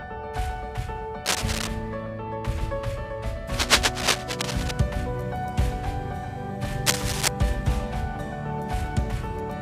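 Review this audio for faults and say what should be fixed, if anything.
Dense, uneven scratching bursts at 1.25–1.68 s, 3.54–4.71 s and 6.86–7.28 s, as loud as or louder than the sound itself, are cable scratch noise, likely from a worn cable or connector being moved. Replace worn cables and connectors, and secure cables so they can't shift during recording.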